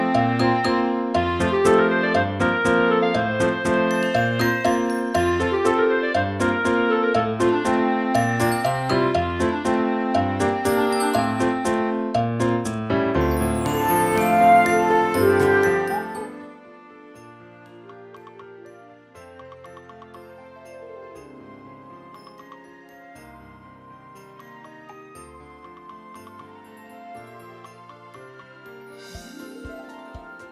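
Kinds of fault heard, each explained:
zipper noise: a roughly 25 dB fade done in coarse steps, about fifty per second, ticks audibly; the waveform shows a staircase, the spectrogram thin vertical lines.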